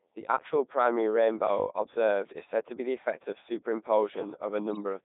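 From start to finish the speech passes through the Codec 2 vocoder, and the damage is heavy. The voice is rebuilt from pitch, voicing, level and a rough spectral envelope, then resynthesised from sine waves. The original waveform is gone. The result is robotic and buzzy. The band runs from about 200 Hz to 3.7 kHz. The sound fits the 3.2 kbit/s mode.

At 4.72 to 4.78 s, bit errors on digital voice radio strike. Flipped bits corrupt the parameters the decoder relies on. The damage sounds like about two frames, with a bit error rate of a few percent. For that brief moment the synthetic voice jumps in pitch, level and tone colour. It comes out as a short warbling bleep of robotic gibberish.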